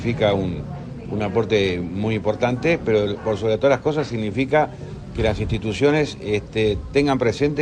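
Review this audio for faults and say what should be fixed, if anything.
Nothing here needs fixing; no technical faults turn up anywhere in the audio, so it can stay as it is.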